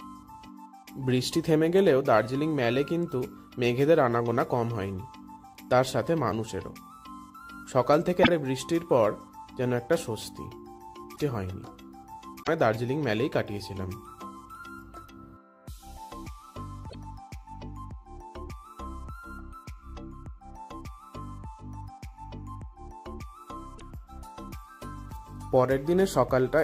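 At 8.20 to 8.29 s, a short glitch cuts through the sound. That is damaged data in a compressed stream. Part of the coded data is wrong at that point. The decoder misreads those frames, loses sync and hunts for the next valid frame header. The same brief glitch recurs at 11.13 to 11.20 s, 12.40 to 12.49 s, 16.86 to 16.95 s and 23.75 to 23.81 s. Each burst lasts under a tenth of a second.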